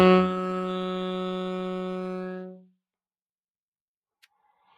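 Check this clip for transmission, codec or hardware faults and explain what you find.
One fault runs through the whole clip: a noise suppressor applied to music or sounds. A suppressor tuned for speech keeps classifying steady components, ambience and decaying tails as noise and pulling them down, while sharp onsets slip through before it reacts. The level swings by around 5 dB, so the sound pumps and thins as sustained parts sink. On a waveform the envelope dips shortly after each attack; a spectrogram shows held bands and tails fading unnaturally fast, with blotchy, fluttering texture where gain keeps changing.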